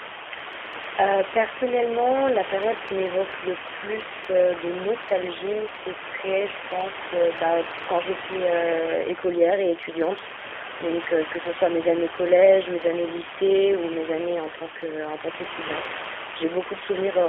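Throughout, the speech goes through a G.729 codec, squeezed into a 300 Hz to 3.4 kHz band and rebuilt from sparse pulses, giving that plainly rough, synthetic 8 kbit/s edge.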